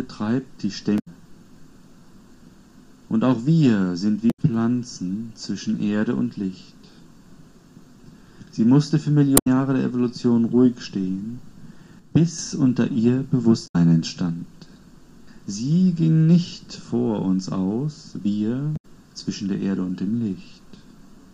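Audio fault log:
0.96–1.08, 4.27–4.39, 9.34–9.47, 13.64–13.76 and 18.73–18.85 s: damaged data in a compressed stream. Brief glitches about 0.12 s long, where the decoder misreads corrupt frames and loses sync.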